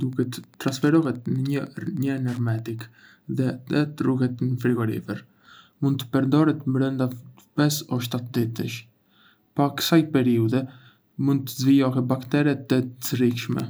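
Wi-Fi interference, 0.00 to 2.83 s: the audio circuit rectifies a nearby radio's beacon every 102.4 ms, producing faint, steady ticking well below the speech.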